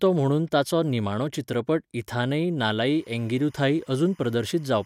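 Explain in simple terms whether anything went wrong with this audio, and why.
From 2.89 s, just after "ताचो निमाणो चित्रपट इथानई", to the end, a faint chirping warble sits behind the speech. This is timecode bleed, a timing signal leaking in from nearby. Unlike a steady whistle or hum, it keeps flipping between two pitches, 1 kHz and 2 kHz.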